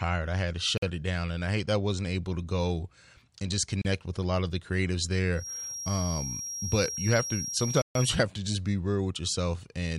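At 0.78 s the speech drops to silence for 49 ms, then resumes. It happens again at 3.82 s, for 32 ms. These gaps are likely a Bluetooth stall. Held-up packets emptied the headphones' buffer, so playback paused until resent data arrived.

From 5.33 s to 8.21 s a thin 5.6 kHz tone sits behind the speech, about 10 dB below it. Its level swells and fades slowly. This is likely a feedback whistle. The loudspeaker-to-microphone loop hovers at the edge of feedback but never runs away.

At 7.82 s, inside that span, a third stall silences the audio for 137 ms. It is the longest gap. The sound then picks up again.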